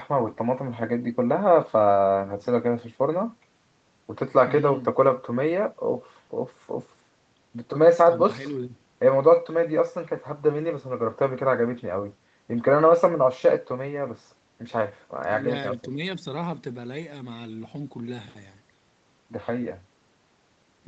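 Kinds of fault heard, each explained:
No faults heard; the speech carries only the expected call-path character, with content stopping at 8 kHz from the codec's bandwidth limit.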